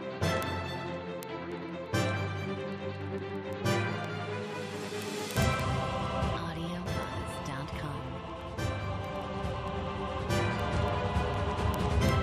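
From 0.14 to 12.20 s, word clock ticks: an unlocked receiver clock slips against the sender's, dropping or repeating a sample about twenty times per second, heard as sharp ticks.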